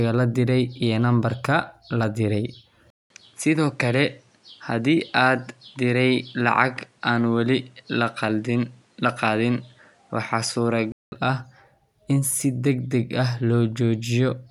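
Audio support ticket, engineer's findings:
Speech dulls 2.90–11.12 s, nothing above 11.4 kHz, new background noise roughly 40 dB down, level steady. Likely input switched to a poorer device: 200 ms silence at the switch and a changed noise floor set it apart from a plain bandwidth drop.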